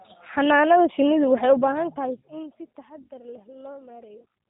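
Throughout, the speech carries plainly audible G.729 codec damage, nothing above 4 kHz and a rough, synthetic pulse-coded texture, fitting an 8 kbit/s stream, unlike mere band-limiting, which stays smooth; the fader-style level changes sound clean.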